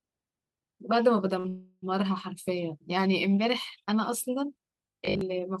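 At 1.39 s the speech briefly hangs: the sound at that instant is held for roughly 50 ms with a faint buzzy smear, and the talker resumes at 1.46 s exactly where they left off. This is a short stall from a late packet. A packet missed its playout time, the jitter buffer ran dry, and the receiver stretched the last sound until it arrived. Nothing is lost, but everything afterwards plays about 49 ms later.

Just after, from 1.48 s to 1.84 s, a longer call audio freeze follows. For about 340 ms the last sound carries on as a fading buzz and hiss that never drops to full silence, and then the speech picks up from the same point with nothing skipped. The likely cause is packets held up in the network long enough to empty the jitter buffer again. The receiver filled the wait with synthetic continuation, which pushes the rest of the speech another 341 ms later.

From 4.89 s to 5.21 s the speech turns into a rigid, metallic drone that still roughly tracks the talker but sits on a fixed 50 Hz buzz. 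This is robotic sound from repeated short buffers. It is likely caused by audio arriving too seldom, so the software loops the last fragment instead of playing new material. A 50 Hz repeat rate fits a 20 ms buffer being replayed, and most of this stretch, around two thirds or more, is repetition rather than real speech.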